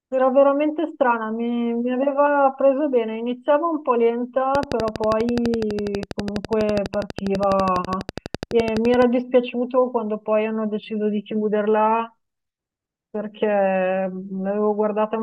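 From 4.55 to 9.03 s a train of clicks ticks over the speech at 12.1 per second, evenly spaced, about fifty in all, likely interference from nearby equipment.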